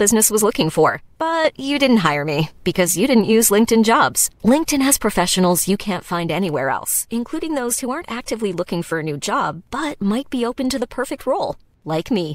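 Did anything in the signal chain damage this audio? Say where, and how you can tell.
Yes: one channel drops out at 0.90 to 1.45 s and from 5.76 s on. The speech falls abruptly by about 6 dB in the mono sum, likely from faulty analogue wiring.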